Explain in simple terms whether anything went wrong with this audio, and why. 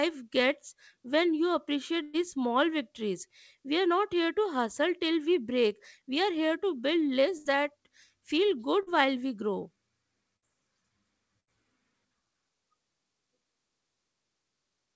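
Four bursts of packet loss, at 2.02–2.15 s (between "gets when you" and "small victories"), 7.37–7.47 s, 10.36–10.44 s and 11.40–11.49 s: 60 to 120 ms of the call went missing, and the receiver stretched the last sound into a fading smear before jumping ahead. One short concealed packet loss occurs at 8.83–8.88 s, between "that feel" and "while we grow": about 40 ms was lost and patched over, leaving a brief wobble.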